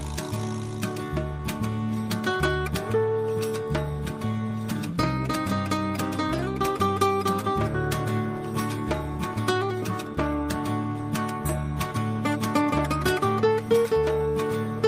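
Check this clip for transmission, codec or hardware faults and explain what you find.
No transmission, codec or hardware faults are audible anywhere in the clip.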